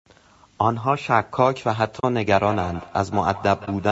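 Low-delay AAC compression runs throughout. The speech sounds plainly rough and grainy, with noise between the harmonics, likely from AAC-ELD's short frames at a rate that fits about 32 kbps. Nothing reaches above 8 kHz.

AAC frame loss with muting comes at 1.99 to 2.04 s. About 40 ms, which fits two lost frames, is zeroed by the decoder, leaving a soft-edged hole.

Feedback echo between two devices runs from 2.36 s to the end. A second device replays the call into the microphone, so the speech comes round again roughly every 150 ms, at its loudest about 16 dB below the speech.

AAC frame loss with muting recurs at 3.65 to 3.68 s. This is a shorter 20 ms faded gap, which fits a single lost frame.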